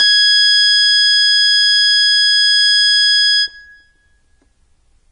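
Heavy MP3 compression runs through the whole of this music clip, with nothing at all above about 10.5 kHz. Swirly, watery textures and metallic chirps sit on the bright, noisy parts, and attacks sound smeared. The damage points to a very low bitrate, likely around 32 kbps, where the encoder runs out of bits, slices off the treble and drops weak frequency lines from frame to frame. On a spectrogram that shows as a hard flat ceiling near 10.5 kHz with blotchy, flickering patches below it.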